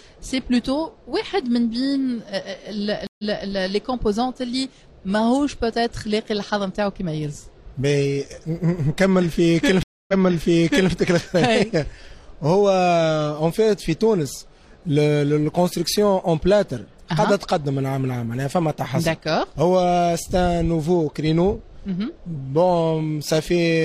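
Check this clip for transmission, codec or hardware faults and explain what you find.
Two stream reconnects interrupt the clip, at 3.07 to 3.47 s and 9.83 to 10.92 s. Silences of 0.12 s and 0.25 s are followed by audio resuming 0.28 s and 0.84 s earlier. A restarted decoder replays resent material, and unlike a plain dropout the audio repeats.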